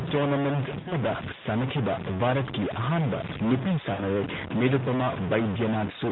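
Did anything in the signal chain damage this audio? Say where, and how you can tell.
Yes. Stuck bit, throughout: distortion rides on the narrowband speech and fills the pauses with noise, likely one converter or sample-format data bit held at a fixed value.

Lost AMR speech frames, 0.80 to 0.93 s and 3.94 to 4.03 s: the radio link dropped about 60 ms each time, which fits three 20 ms frames. The decoder stretched the last good sound and faded it out.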